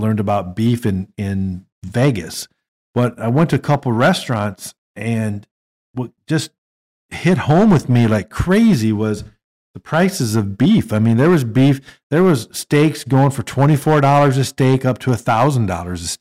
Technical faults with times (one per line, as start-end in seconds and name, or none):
0.00-16.21 hard clipping